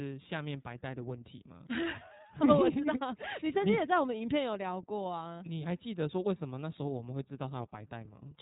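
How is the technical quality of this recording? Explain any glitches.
The quality is limited by narrowband codec damage that runs through the whole clip. Throughout, the speech sounds slightly rough and synthetic, with nothing above about 3.8 kHz. This is the iLBC codec, which codes each short frame's excitation independently. The sound fits its 30 ms frame, 13.33 kbps mode.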